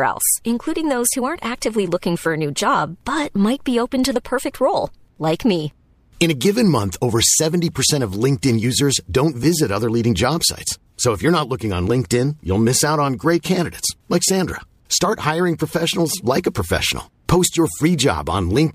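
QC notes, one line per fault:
No technical faults turn up anywhere in the recording; level and signal path hold steady from the opening through to the close.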